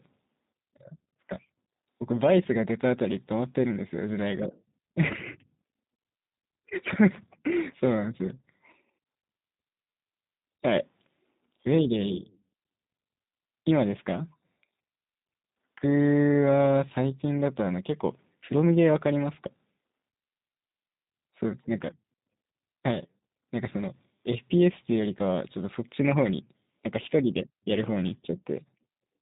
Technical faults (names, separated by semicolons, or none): G.729 codec